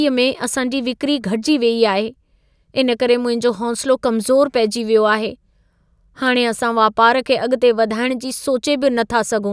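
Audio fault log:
No technical faults are audible anywhere in the speech signal.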